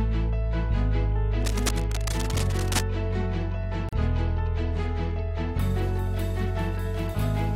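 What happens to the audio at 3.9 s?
A gap at a join of encoded pieces opens from 3.89 to 3.93 s: a gap of about 39 ms cuts into continuous sound with smeared edges. Separately encoded pieces, likely about 4 s long, were joined untrimmed, keeping encoder delay and padding; the sound then resumes where it stopped.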